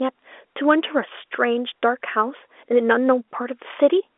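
There are no technical faults to describe in this speech clip, which carries the narrow band of G.711 telephone coding with nothing above about 3.7 kHz.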